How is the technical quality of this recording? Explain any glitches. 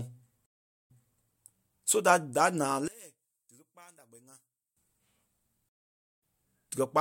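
The recording has three clear glitches: two dropouts where playback breaks and restarts, and one stretch where the speech sinks to a faint trace.

From 0.46 to 1.19 s, and again from 5.69 to 6.20 s, the audio goes silent, for about 0.42 s and 0.52 s, and then resumes. These are stream reconnects. The link dropped, the player restarted its decoder, and playback resumed from a different point in the stream. The first one repeats about 0.31 s of speech that was already heard. The second skips ahead by roughly 0.2 s.

From 2.88 to 4.77 s, just after "da da naa", the speech drops by about 24 dB and leaves only a faint residue. The likely cause is one channel inverted. With one side's polarity reversed, the centred speech common to both channels cancels when they are summed to mono, and only their small differences remain.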